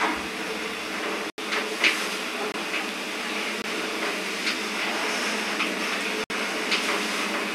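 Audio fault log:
1.30 to 6.30 s, block of digital silence, four times: 1.30 to 1.38 s (80 ms), 2.52 to 2.54 s (20 ms), 3.62 to 3.64 s (20 ms) and 6.24 to 6.30 s (60 ms). Each time the output drops straight to silence and returns with no fade. The two 20 ms gaps are the shortest. The 60 ms and 80 ms gaps are heard as brief holes in the sound. This likely happened because the output buffer was not filled in time.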